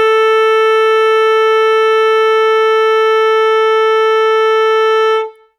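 The music runs without any audible dropout, distortion, glitch or other technical disturbance at any point.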